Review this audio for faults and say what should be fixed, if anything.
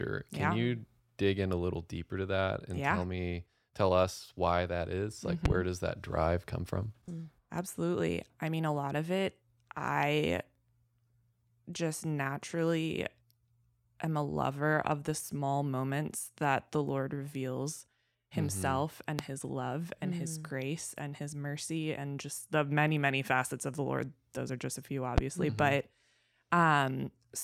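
Loud pops sit on top of the speech at three points. The first, from 5.45 to 5.53 s, is two pops in quick succession. Single pops follow at 19.19 to 19.22 s and 25.18 to 25.20 s. Each rises to roughly 20 dB above the speech, which carries on underneath. The likely cause is a sudden voltage step or pulse from a plug, switch, static or driver glitch, shaped by the circuits downstream. Secure connectors, avoid switching during recording, and control static.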